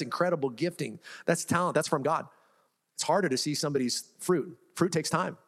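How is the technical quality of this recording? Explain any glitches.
The recording has one glitch. From 1.66 s to the end, the speech is a time-stretched section, sped up about 1.48 times. Its likely cause is software squeezing the audio by dropping short pieces, so it sounds rushed. Unlike a simple speed-up, the pitch stays unchanged.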